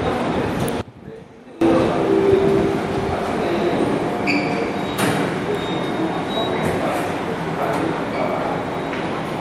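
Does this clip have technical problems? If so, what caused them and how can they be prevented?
Yes. From 0.81 to 1.61 s the sound drops by about 21 dB, most likely because of one channel inverted: one stereo side has reversed polarity, so shared content cancels when folded to mono. A waveform shows the envelope collapsing; a spectrogram shows that span dimmed. Checking channel polarity and listening to a mono fold-down before export prevents this.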